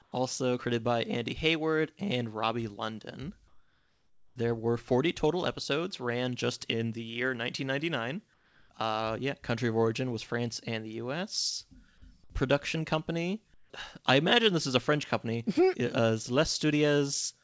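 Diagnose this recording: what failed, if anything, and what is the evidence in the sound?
Comfort noise in place of the background at 0.02–0.12, 3.48–4.36, 8.34–8.70 and 13.54–13.70 s: pauses turn steady and featureless, likely from discontinuous transmission in call processing.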